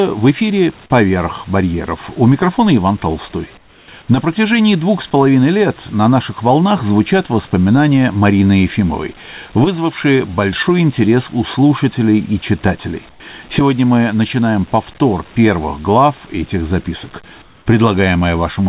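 In three pauses of this speech, the sending side most likely switched to discontinuous transmission and the receiver filled the gap with comfort noise in place of the background: 3.58 to 3.88 s, 13.1 to 13.2 s after "у слушателей и читателей", and 17.42 to 17.66 s after "первых глав этих записок". Each time the real room background gives way to a flat, featureless hiss about 6 to 9 dB quieter, heard within the narrowband call sound that stops at 4 kHz.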